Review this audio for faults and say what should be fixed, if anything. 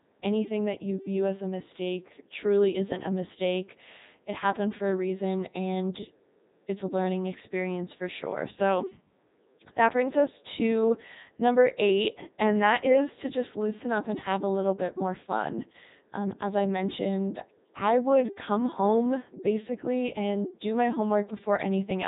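Codec 2 vocoder damage runs throughout the clip, and it is heavy. The speech has the robotic, buzzy character of a parametric coder, which fits Codec 2 at its 3.2 kbit/s mode. Only pitch, voicing, energy and a coarse spectral envelope survive. The decoder then rebuilds the voice from sine waves, so the original waveform is gone. Nothing is heard above 3.8 kHz. To prevent this, carry the speech over a waveform-preserving codec such as Opus at a speech-grade bitrate instead of a low-rate vocoder.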